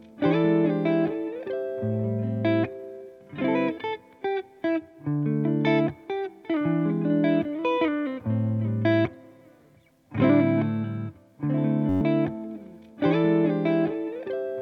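At 11.89 s the system hung while the sound hardware kept replaying its ring buffer, a system hang loop. A 10.67 ms slice, which fits a 512-sample buffer, repeats 11 times until 12.01 s, giving a steady 93.8 Hz buzz and about a tenth of a second of missing audio.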